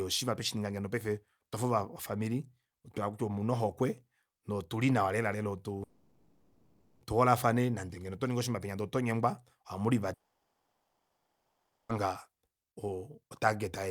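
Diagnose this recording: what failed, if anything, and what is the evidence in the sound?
Two gaps break the speech, at 5.83 to 7.03 s and at 10.13 to 11.91 s. In the first, the last sound is stretched into a fading buzz across the whole 1.2 s. In the second, that fill dies almost at once and about 1.7 s of silence follows. Both times the speech resumes with the missing stretch gone. The stage is the network: likely a long network dropout, with receiver concealment covering packets that never arrived.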